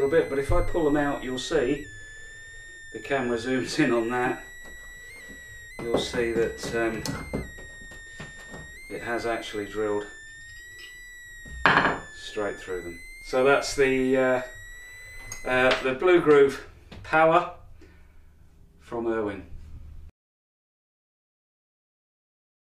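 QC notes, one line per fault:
0.00–15.84 s: switching supply whistle, a high tone near 2 kHz that wanders between 1.7 and 2.16 kHz, sitting roughly 20 dB below the sound; the drifting pitch distinguishes it from fixed-pitch hum.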